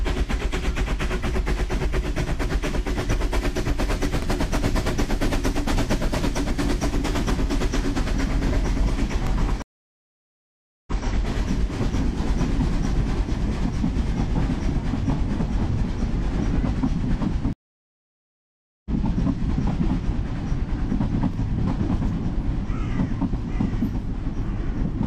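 At 4.22–4.27 s the sound stutters briefly as about 44 ms is played twice. This is the overlapping chunks fault: the audio was handled in blocks of about 5 s, and each block began slightly before the previous one ended, so the seam repeats. It recurs at 9.27–9.31 s and again at 21.34–21.38 s. The tell is a tiny repeat with no silence.

A stream reconnect follows at 9.62–11.04 s. The connection dropped, leaving about 1.25 s of silence, and playback restarted on a fresh decoder. The sound comes back 171 ms earlier than where it cut off, so a short stretch is heard again, entering softly as the first frames fade in. A second reconnect at 17.53–18.90 s gives about 1.33 s of silence, then resumes roughly 0.7 s later, skipping material. Unlike the chunk joins, these have a long gap and a jump in position.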